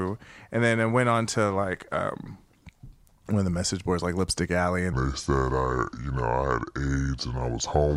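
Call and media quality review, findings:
Section at the wrong speed, 4.93 s to end of clip. Speech abruptly slower and deeper, about five semitones down, playing at 0.72x. Likely a playback or resampling stage on the wrong clock. Tempo and pitch drop together, unlike a pitch-shift fault, which keeps timing intact.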